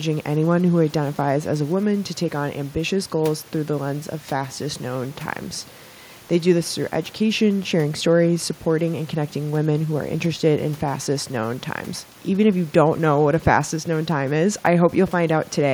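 Nothing stood out on listening to this speech recording.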